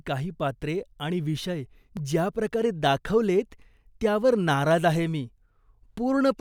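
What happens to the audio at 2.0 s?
At 1.97 s, just before the 2.0 s mark, there is a tiny jump in the speech where a sliver of sound, on the order of a millisecond or two, is missing. There is no gap of silence; the audio on either side is butted directly together. The likely cause is a dropped buffer (overrun): the recording software failed to collect a block of samples before the hardware overwrote it, so that piece was lost and playback skips ahead.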